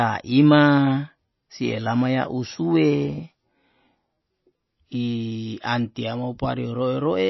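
Throughout the speech, nothing is heard above 5.8 kHz, and faint detail flickers in and out with a watery, swirly texture, most likely from MP3 compression at a bitrate around 24 kbps. Unlike a plain low-pass filter, the starved encoder switches weak frequency lines on and off between frames.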